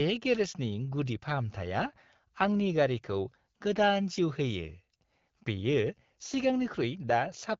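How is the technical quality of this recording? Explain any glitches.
Nothing here jumps out as a glitch; it's a speech recording that's come through an AMR wideband (HD Voice) link at 12.65 kbit/s, and there are no dropouts, clicks or other faults to point to.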